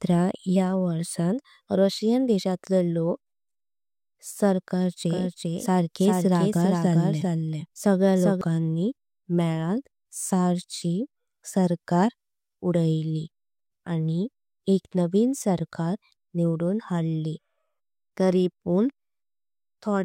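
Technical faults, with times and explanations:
5.09–8.41 s, doubled audio track: the speech repeats about 0.4 s later, some 5 dB quieter, likely from a slower capture path; the spectrogram shows offset duplicate patterns with abrupt edges.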